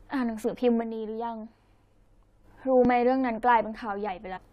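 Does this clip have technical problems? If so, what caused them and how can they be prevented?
Yes. From 0.81 to 2.44 s the level falls abruptly by about 6 dB. This is likely one channel dropping out before the stereo pair was summed to mono. Check cables and connectors, and monitor both channels while recording.

At 2.06 s and 2.85 s the sound makes a small jump ahead each time. These are likely dropped buffers (overrun), each losing about 10 ms of sound. Use larger buffers and reduce system load during capture.

From 4.35 to 4.38 s a short disturbance appears. This is damaged data in a compressed stream, where the decoder lost sync and then recovered. Use reliable storage and transfer, and verify file checksums.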